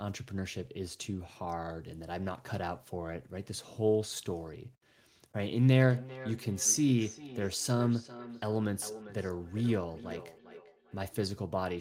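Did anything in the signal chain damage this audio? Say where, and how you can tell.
Yes, at the call-processing stage. From 5.9 to 11.0 s the speech returns about every 0.4 s, peaking about 15 dB below the direct sound. This is feedback echo between two devices: one plays another's audio, the other's microphone recaptures it, and neither echo canceller removes it.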